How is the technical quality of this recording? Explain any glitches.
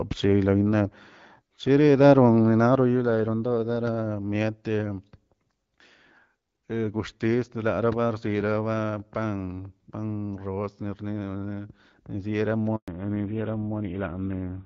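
The recording has two linked glitches near the end, both from the call changing networks.

Handover gap, 12.76 to 12.88 s: the link switched networks and no frames arrived, so the sound cuts to silence for 120 ms.

Fallback to narrowband from 12.88 s to the end: the call left HD Voice, with its light AMR-WB coding, for an older codec, which fits GSM full rate. Nothing above 4 kHz remains, so the sound turns duller and rougher.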